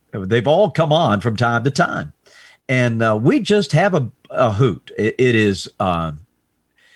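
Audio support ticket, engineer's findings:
No audible faults found.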